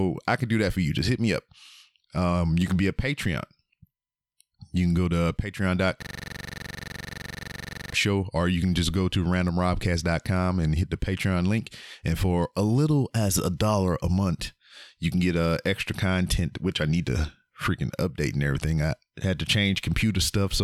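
Speech clip with a system hang loop from 6.02 to 7.93 s, just before "show or you can": a 42.67 ms slice repeats about 45 times, giving a rigid 23.4 Hz stutter-buzz as the device kept replaying its ring buffer, which fits a 2048-sample buffer.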